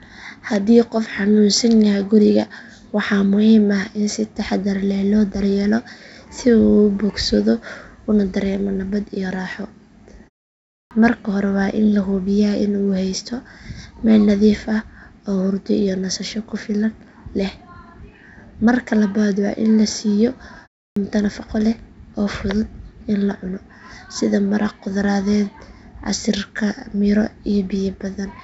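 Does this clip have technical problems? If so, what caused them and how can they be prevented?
Yes. There are clipped starts after a pause at 10.86 s, where about 49 ms is lost after a 0.65 s gap, and at 20.91 s, where about 54 ms is lost after 0.32 s. The output device sleeps during silence and swallows the first sounds while waking. Muted pauses lose no speech, but here the onsets vanish. Keeping the output stream open through silence prevents this.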